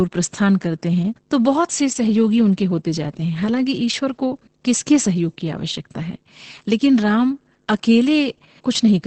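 It's speech with Opus voice compression damage all the way through. Nothing is left above about 8.7 kHz, and the excitation is coded so coarsely that the voice comes out muffled, hoarse and a bit robotic, which fits SILK-mode wideband Opus at roughly 10 kbps.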